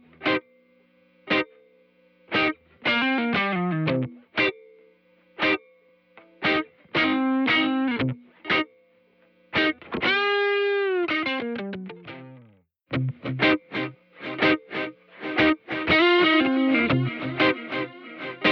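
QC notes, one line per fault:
Nothing stood out on listening.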